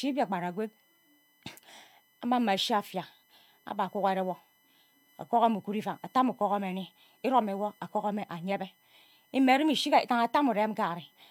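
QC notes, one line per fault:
Throughout: USB whine, faint fixed 1 kHz tone loudest at 2 kHz harmonic, from the bus's 1 ms frame current leaking through power or ground.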